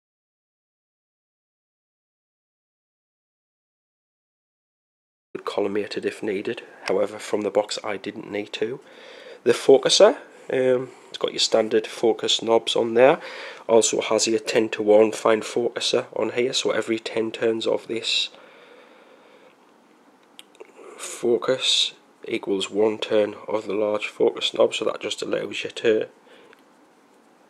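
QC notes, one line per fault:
0.00–5.35 s, audio dropout to silence: the clip opens already inside a gap of silence, with no room tone, hiss or noise floor at all, and sound arrives abruptly at 5.35 s as if joining mid-flow rather than starting. That dead silence, instead of a quiet passage, a fade-in or a noise gate's residual floor, sets it apart, and most likely the input was lost while the recorder kept writing empty samples.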